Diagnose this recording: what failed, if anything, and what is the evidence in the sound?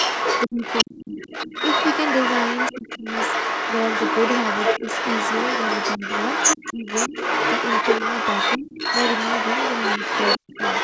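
Other side's voice leaking through, for the whole clip, at roughly the talker's level. Call processing stage: the echo canceller likely left loudspeaker sound in the microphone.

Speech suppressed in double talk at 0.47–1.5, 2.72–3.05, 6.0, 6.73–7.14, 8.58–8.69 and 10.38–10.53 s. The talker dips sharply, deepest near 1 s and 10.4 s. Overlap likely made the canceller duck everything.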